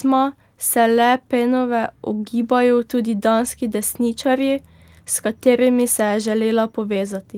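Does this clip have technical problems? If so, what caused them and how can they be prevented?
No, nothing in this speech clip points to a technical problem. With no fault present, there is nothing here that needs preventing.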